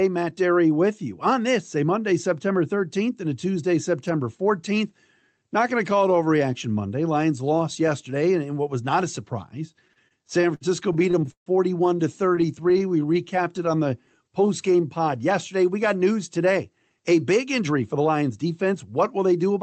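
From 9.71 to 11.49 s, just after "was not a surprise", packets kept arriving late and the jitter buffer repeatedly ran dry. These are repeated stalls (stutter): fourteen gaps filled with about 390 ms of continued sound, the longest 149 ms and faded, so the speech drags and catches.

From 12.26 to 13.29 s the buffer emptied eight more times, this time only briefly (at most 21 ms each), giving a lighter stutter.

Overlapping this, from 12.32 to 14.99 s, the receiver rebuilt its reserve by repeating pitch periods. This jitter buffer slow-down adds about 208 ms and plays the speech at 92% speed without changing pitch, so sounds come out drawn out.

From 16.69 to 19.58 s, after "got news today", the buffer held too much audio and the receiver trimmed out pitch periods. This jitter buffer speed-up removes roughly a third of a second and plays at 110% speed, so the speech sounds hurried at an unchanged pitch.

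Throughout, the call codec's band limit at 8 kHz can be heard as missing top-end brightness.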